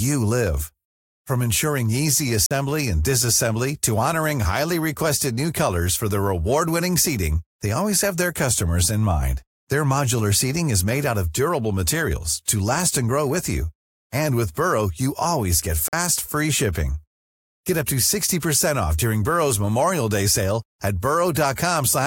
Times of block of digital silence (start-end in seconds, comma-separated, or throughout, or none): 2.46-2.51, 15.88-15.93